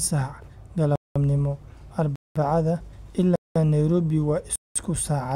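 Speech here is broken by a gap between chunks: hard-edged silences of 200 ms at 0.96, 2.16, 3.36 and 4.56 s, each following 1 s of audio. Playback pauses at every chunk join, so the sound is interrupted but nothing is lost.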